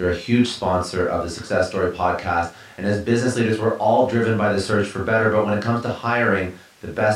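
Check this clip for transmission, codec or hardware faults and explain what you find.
No faults can be heard anywhere in the speech recording. Nothing in the sound breaks, drops out or changes character in a way that needs explaining.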